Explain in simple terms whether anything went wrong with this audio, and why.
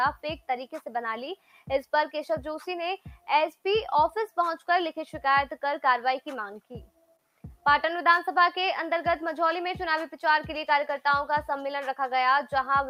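Something did go wrong, twice. From 1.36 to 1.65 s, and again from 6.87 to 7.19 s, the sound suddenly turns quieter for about a third of a second. This is sound cut by the noise suppressor. That tool is meant to remove background hiss. Here it mistook real sound for noise and pushed it down hard. The steady, lingering parts sink and fade away too early. Sharp, sudden bits still come through.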